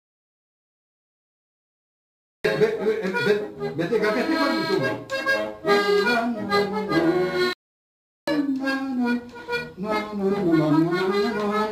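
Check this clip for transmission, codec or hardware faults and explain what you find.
Two faults are audible: a stretch of silence at the very start, then a brief halt later on.

From the beginning to 2.45 s the clip is an audio dropout to silence, already under way when it opens. The input was likely lost while the recorder kept writing silence. There is no room tone, only a dead-flat waveform and an empty spectrogram until the sound begins.

At 7.53 s a playback stall stops the sound mid-flow for about 0.74 s, until 8.28 s, and it then carries on. The likely cause is the player running short of data. The waveform shows a flat gap and the spectrogram a clean vertical blank band.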